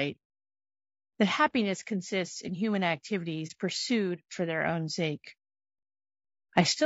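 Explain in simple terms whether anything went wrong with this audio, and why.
Throughout the recording the speech has a rough, grainy texture, with a hiss tucked between the tones of the voice and a top end that sounds dull or artificial. That is likely low-delay AAC compression, the kind used on video calls. To keep delay short it chops sound into very small slices, which capture the voice's pitch poorly, and when squeezed hard it fills gaps with noise and fakes the highest sounds.

There is also a short, soft dropout from about 3.47 to 3.52 s, just before "pursued for their own". The sound fades out and back in over roughly 30 milliseconds. This is AAC frame loss with muting: a small chunk of the stream went missing, which fits one lost frame, and the decoder replaced it with silence. The overlapping way the chunks join smooths the edges of that hole.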